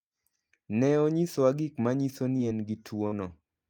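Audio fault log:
2.37–2.41 s, short concealed packet loss: just after "onyisowa gik manyiso" about 20 ms of audio failed to arrive, and the receiver extended the preceding sound for roughly 15 ms before blending back in, giving a brief smear.
3.07–3.14 s, burst of packet loss: around 40 ms went missing in a run, and the decoder stretched the last sound over about 48 ms while fading it, so a held buzz or hiss dies away before the audio resumes further on. A spectrogram shows frozen, dimming bands ending in an abrupt join.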